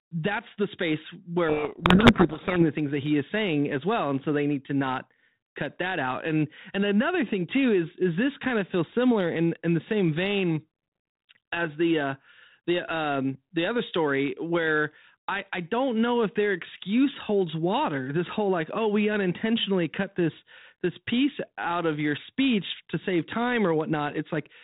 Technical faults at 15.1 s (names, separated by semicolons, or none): none